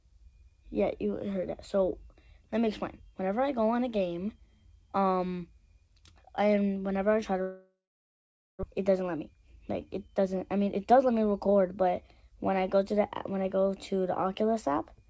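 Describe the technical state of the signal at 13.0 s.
At 13.0 s the signal is intact, with no fault present; the sound still carries the character of the WebRTC call path, whose band stops at 8 kHz in a way that fits the G.722 codec.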